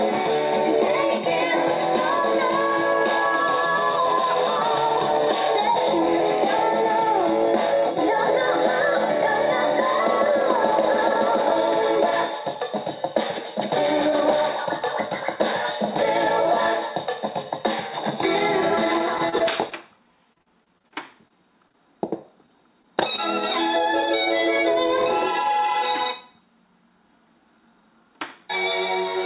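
Repeated packet loss (robotic sound) runs from 19.18 to 21.76 s. Across that stretch packets failed to arrive in time 14 times, losing about 200 ms of audio in total, with the longest gap 37 ms. Each hole was patched by extending the preceding sound, adding up to 320 ms of filler, or roughly 12% of the span. Because the gaps recur so closely, the result is choppy and robotic, with fragments dropping out.

Jitter buffer speed-up overlaps the end of that stretch, from 21.18 to 22.60 s. Late packets had piled up in the buffer beyond its target, so the receiver trimmed short pitch-period slices again and again to catch up, cutting around 40 ms in all. Playback runs at 102% speed with the pitch unchanged. That is under the roughly 105% at which audio starts to sound hurried.

Short concealed packet loss occurs twice, at 22.82–22.86 s and 23.16–23.20 s. Each time about 20 ms never reached the decoder. 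The receiver bridged the holes with 14 ms and 18 ms of synthesized continuation of the preceding sound, then crossfaded back into the real signal, leaving a brief smear or wobble. The audio also has nothing above 4 kHz, consistent with the G.711 mu-law call codec at 64 kbps.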